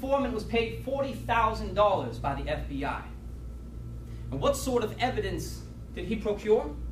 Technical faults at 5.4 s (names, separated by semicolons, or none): none